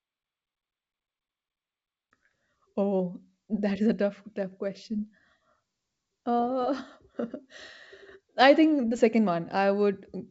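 No technical faults are audible.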